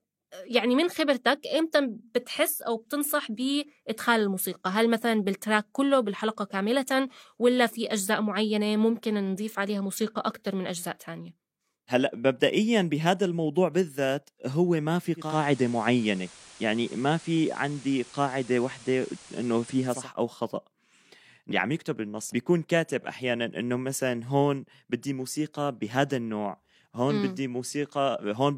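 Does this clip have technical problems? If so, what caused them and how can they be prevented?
Yes. From 15.15 to 20.10 s the receiver lost its digital signal and blended to analogue FM over 246 ms, so hiss appears about 25 dB below the signal, and the level shifts about 1 dB. Improving digital reception with a better antenna or placement, or recording from a digital-only source, prevents this.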